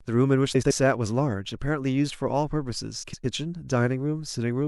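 From 0.54 to 0.71 s and 3.03 to 3.25 s, frames out of order swap two short runs of speech, about 78 and 105 ms each. This gives a garbled flutter.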